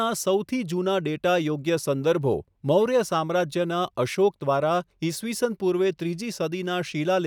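Nothing stood out as a technical fault on listening to the speech.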